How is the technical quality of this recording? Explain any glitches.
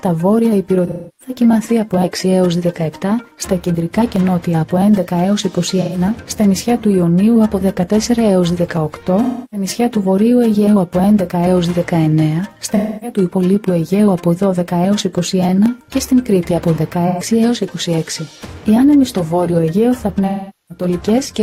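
The recording is marred by two recurring faults: six patches of concealed AAC frame loss and three isolated clicks.

AAC frame loss with concealment occurs at 0.87, 5.81, 9.22, 12.76, 17.07 and 20.27 s, lasting between 128 ms and 427 ms. Missing coded frames were rebuilt from the previous good spectrum, so each gap becomes a smeared, noisy, phasey stretch instead of the real sound.

Dropped samples are heard as single sharp clicks at 4.16, 8.77 and 15.66 s. The cause is likely a loss of well under a millisecond of samples, making the waveform jump abruptly to a later value and producing a brief broadband tick.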